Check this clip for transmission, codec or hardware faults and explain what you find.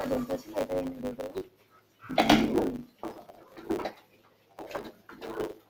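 Two faults run through the whole clip, and the noise suppressor also pulls down six specific stretches of sound.

Noise suppressor applied to music or sounds, throughout: a suppressor tuned for speech is left active, so it treats sustained tones, ambience and decays as background noise and pulls them down while onsets pass. The gain it applies swings by something like 20 dB, so held material repeatedly sinks and recovers. The result is a pumping, fluttering texture, with tails thinning out instead of ringing naturally.

Block size mismatch (truncated), throughout: one stage hands over longer blocks than the following stage consumes, and the surplus at the end of each block is discarded. The result is a steady 100 Hz buzz, the rate at which those cuts recur, which fits written blocks of 512 samples. Because a slice of every block is lost, the audio plays about 1.07 times faster than it should, yet its pitch stays roughly where it belongs.

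Sound cut by the noise suppressor, at 1.43–2.03 s, 2.87–3.03 s, 3.26–3.60 s, 3.93–4.58 s, 4.91–5.16 s and 5.54–5.70 s: in each of these stretches the suppressor judged the sound to be noise and attenuated it more heavily than its surroundings. The deepest dips are about 14 dB at 1.43 s and 3.93 s, about 13 dB at 4.91 s and 5.54 s, about 12 dB at 2.87 s and about 9 dB at 3.26 s. Sustained or decaying parts lose level or have their tails clipped short, while sharp attacks largely survive.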